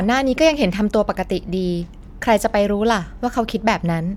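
No technical faults can be heard anywhere in this speech recording. There are no events to place in time, so there are no times or values to report.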